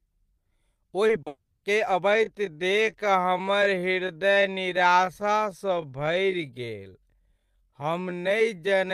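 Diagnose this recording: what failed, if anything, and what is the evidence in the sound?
Short concealed packet loss sits at the network-to-decoder stage, at 1.07 s (about 20 ms) and 1.22 s (about 40 ms). Each gap was filled by extending the preceding speech, so you hear a quick smear or wobble instead of a hole. On a spectrogram, these spots show harmonics held flat, with no natural movement, for a frame or two. The waveform shows a repeated, overly regular cycle that blends back into real speech.

A long network dropout follows directly, from 1.27 s to 1.63 s, and a lost stream is the likely cause. About 350 ms of made-up sound continues the last speech as a buzz or hiss that decays, followed by roughly 30 ms of near silence. Speech then resumes with that stretch simply missing. On a spectrogram, the harmonics smear and fade to an empty band. The waveform shrinks to a flat line before the level jumps back.

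A time-stretched section runs from 2.03 s to the end. The likely cause is processing that slowed playback to about 0.6 times normal speed while keeping the pitch. The pace drops abruptly, and speech sounds drawn out. On a spectrogram, the harmonics stay at the same frequencies but stretch along the time axis. The waveform shows repeated short segments spliced together.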